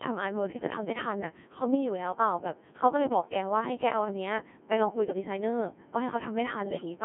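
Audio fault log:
Throughout: Codec 2 vocoder. The audio is rebuilt from sine waves using only pitch, voicing, energy and a coarse spectral envelope, so the original waveform is gone. The result is heavily robotic and buzzy within a 200 Hz to 3.4 kHz band, and the sound points to a 1.6 kbit/s mode.
6.64 to 6.85 s: bit errors on digital voice radio. Corrupted bits, around one in ten, reached the vocoder. Each bit steers a whole frame's pitch, level, voicing or spectrum, so this brief stretch, which fits about five frames, lurches in pitch and tone into warbling, robotic gibberish.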